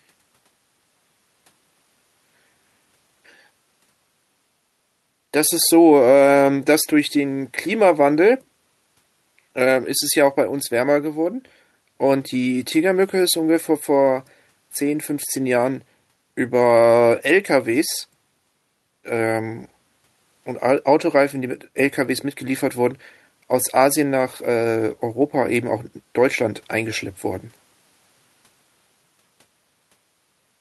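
Nothing goes wrong anywhere in this speech recording, so there's no fault to point to at any moment.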